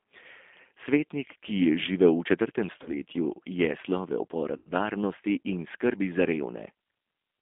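G.729 codec, throughout: the audio is confined to roughly 250 Hz to 3.6 kHz and plainly rough and synthetic, which fits an 8 kbit/s G.729A stream rebuilding each 10 ms frame from a vocal tract filter, a pitch predictor and a few pulses.

VoIP packet loss concealed by the speech codec, at 2.83 to 2.90 s and 4.57 to 4.71 s: the decoder stretched its last pitch and filter into a fading buzzy tone or coloured noise over gaps of about 30 ms, then 90 ms, which points to one lost packet and then three. Weak, distorted sound follows each gap as frames recover.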